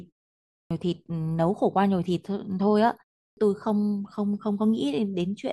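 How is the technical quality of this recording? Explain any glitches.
Two glitches, both the same fault: a clipped start after a pause, at 0.64 s and 3.30 s. The output device drops into a sleep state during silence and has not fully woken when speech resumes, so the first 66 ms (after a 0.6 s pause) and 70 ms (after a 0.35 s pause) never reach the output. Speech snaps in abruptly, missing its opening sounds.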